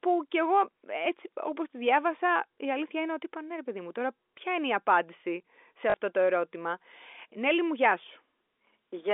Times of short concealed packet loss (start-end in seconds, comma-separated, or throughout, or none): none